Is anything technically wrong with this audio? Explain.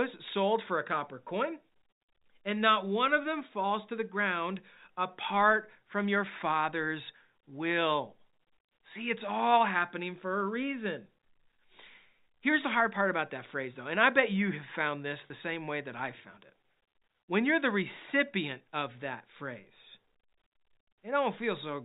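Yes. At 15.27 to 15.30 s there is packet loss with pitch repetition: about 30 ms, which fits a single lost packet, bridged by repeating the last pitch period. The speech briefly holds on a slightly buzzy tone instead of dropping to silence or clicking, which sets it apart from a plain dropout.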